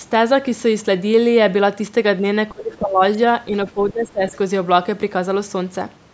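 Speech suppressed in double talk, likely the cause of two dips in the speech, from 2.52 to 3.01 s and from 3.74 to 4.36 s. In each, the level falls for about half a second, by about 20 dB in the first and about 15 dB in the second. The echo canceller had the far side playing on the loudspeaker while this side spoke, and could not tell this talker apart from the echo, so it turned the talker down along with it. The call microphone processing limits the audio to nothing above 8 kHz.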